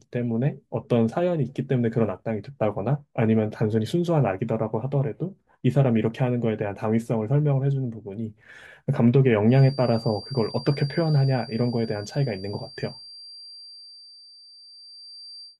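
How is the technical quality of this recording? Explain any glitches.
The speech has one clear flaw. A feedback whistle runs from 9.45 s to the end at 15.59 s: a thin 4.7 kHz tone, around 20 dB below the speech, likely from a loudspeaker-to-microphone loop sitting just short of runaway.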